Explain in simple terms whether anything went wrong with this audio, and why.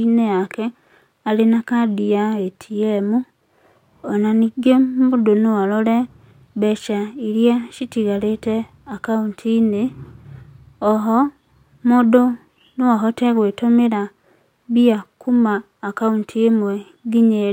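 Nothing went wrong here.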